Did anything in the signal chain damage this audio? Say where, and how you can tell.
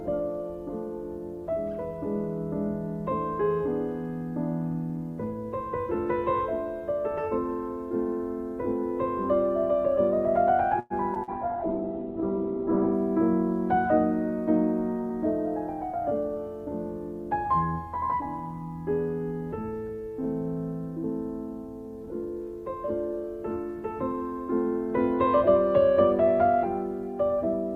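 Yes. Several faults appear in the network and jitter-buffer stages of a call path, all between about 10.8 and 16.4 s.

From 10.79 to 10.93 s the sound stops moving forward, and the last moment is stretched into a fading buzz for about 109 ms before the audio picks up again where it left off. Nothing is lost. A gap is inserted instead. This is a call audio freeze. The likely cause is packets stalling in the network, so the jitter buffer ran dry and the receiver kept extrapolating until data arrived.

Just after that there are two brief smears, at 11.14 to 11.18 s and 11.23 to 11.30 s. In each one, about 40 ms of real audio is gone, replaced by a short wobble. This is short concealed packet loss. Packets missed their decode deadline, and the decoder papered over the holes by continuing the preceding sound and then crossfading back. The first patch is much shorter than the loss, which also takes back roughly 30 ms of the delay added by the freeze.

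From 11.29 to 13.03 s the sound turns muffled and rough. The top end collapses from around 20 kHz to 4 kHz, and coarse, watery coding is audible. This is a call bitrate drop. The sender's bandwidth estimate fell, and the Opus encoder went from 64 to 8 kbps, holding the lowest rate for about 1.66 s. At that rate it both quantises coarsely and low-passes the signal.

From 15.96 to 16.36 s the audio sounds hurried while its pitch stays the same, running about 114% of normal speed. This is a jitter buffer speed-up. After the earlier disruption the buffer was holding more audio than its target, so the receiver repeatedly cut out short pitch-period chunks, roughly 70 ms in total, to bring the latency back down.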